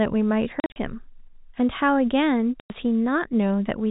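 A speech clip over a telephone-band line (the 4 kHz ceiling of G.711 coding) suffers packet loss filled with silence: scattered dropouts from 0.6 to 0.76 s, gaps up to 40 ms, then a solid 100 ms hole at 2.6 s. Waveform and spectrogram show flat silent blocks with hard vertical edges, which fits 20 ms packets.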